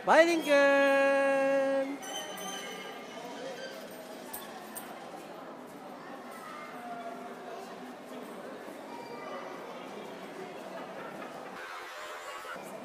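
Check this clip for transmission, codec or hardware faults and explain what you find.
One fault shows up, a planar audio read as interleaved error from 11.56 to 12.56 s. Each block of about 23.2 ms, which fits a 1024-sample block, stores all left samples before all right ones. The player takes them as alternating left-right pairs. So each block's left half, then right half, plays at double speed. Pace holds, but the sound jumps an octave, 12 semitones, with a flutter at about 43 Hz, the block rate.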